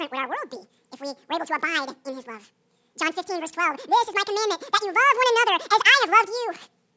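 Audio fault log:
Throughout, wrong sample rate: the speech runs at twice its proper speed and sits a full octave (12 semitones) too high, because the samples are being read out at double the rate they were captured at, which fits 8 kHz audio played back at 16 kHz.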